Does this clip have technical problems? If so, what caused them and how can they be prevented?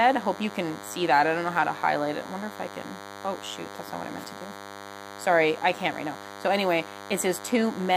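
Yes. DECT cordless phone buzz runs throughout. It is a thin 100 Hz buzz with many harmonics, roughly 15 dB below the speech. A nearby DECT phone sends radio bursts every 10 ms, which the audio circuit rectifies. Keep DECT phones away from recording gear.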